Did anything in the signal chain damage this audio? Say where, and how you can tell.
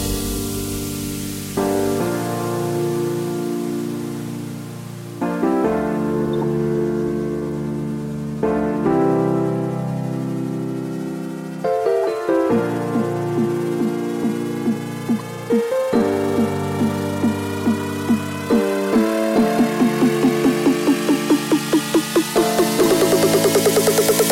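Yes, at the codec stage: corrupt frames were decoded at four points. The worst is a loud burst from 6.34 to 6.44 s, spanning a few frames. Shorter blips follow at 12.03, 15.19 and 22.84 s, each much quieter. Each is a brief chirp or noise burst that doesn't belong to the surrounding sound. Flipped bits in the compressed frames made the decoder misread gains and codes. It then placed energy at the wrong frequencies for the length of each damaged frame.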